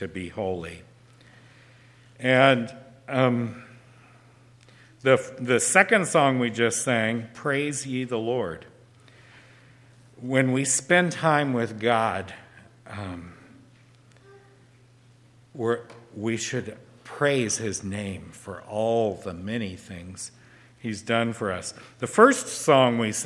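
No technical faults are audible.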